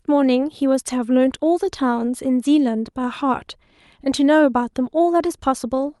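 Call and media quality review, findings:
Nothing to flag on this speech clip: it came through the call path as expected, with the top end rolling off around 12 kHz as that codec setting would give.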